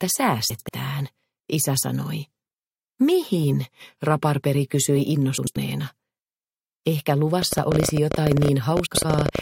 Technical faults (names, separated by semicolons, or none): frames out of order; train of clicks